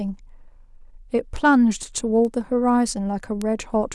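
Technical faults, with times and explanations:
1.36 s, 2.25 s and 3.42 s: bit error spikes, single flipped bits in one or two samples, peaking at about -16, -22 and -10 dBFS, heard as sharp broadband ticks unrelated to the speech.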